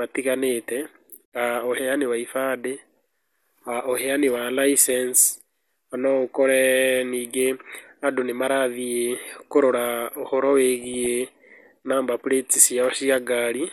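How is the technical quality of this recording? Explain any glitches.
The quality is compromised: the whole recording has a compressed, dull character, and there's one short burst of burbling near the end.

MP2 compression runs through the entire clip. The speech sounds dull and plainly gurgly, likely from MPEG Layer II coding starved of bits, which fits something around 80 kbps. The upper sub-bands get switched off and the remaining ones are quantised coarsely, leaving that grainy edge.

DAB burbling hits from 10.78 to 11.06 s. For those few hundred milliseconds individual sub-bands get short blips of noise, giving a burbling over the speech. That's bit errors slipping past error correction into the audio data at a modest rate, corrupting samples frame by frame.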